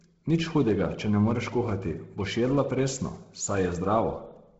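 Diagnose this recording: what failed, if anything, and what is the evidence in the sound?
Codec stage, likely Bluetooth LC3 compression run at a starved bitrate. Throughout, the speech stops at 7.8 kHz, and its upper band sounds grainy and breathy, filled with noise.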